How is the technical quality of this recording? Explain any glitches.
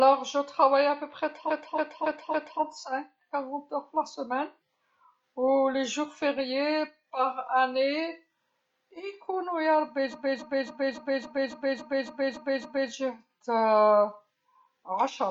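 The recording has two stutters caused by repeated frames. From 1.47 to 2.58 s, a 0.28 s block of speech plays four extra times, adding 1.11 s. From 10.10 to 12.89 s, the same-length block loops ten extra times, adding 2.79 s. Each block, which fits about six compressed frames, was sent or stored more than once, so the decoder replays it.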